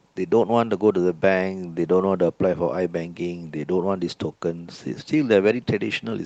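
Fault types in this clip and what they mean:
No faults in this speech clip.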